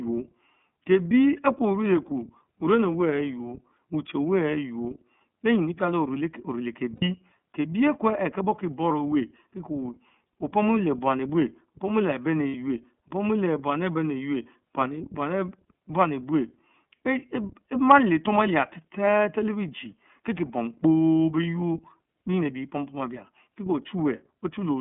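iLBC codec across the whole recording: the speech is confined to a narrowband line of roughly 150 Hz to 3.4 kHz, with plainly audible rough, synthetic grain. Each 30 ms frame's excitation is coded independently, which fits iLBC's 13.33 kbps mode.

Lost iLBC frames at 6.96 to 7.03 s and at 12.48 to 12.54 s, just before "opomu leh buam". Each gap of about 60 ms, consistent with two missing 30 ms frames, is filled by a repeated pitch cycle blended with noise. It sounds like a short, buzzy held vowel, and the voice is right again almost at once afterwards.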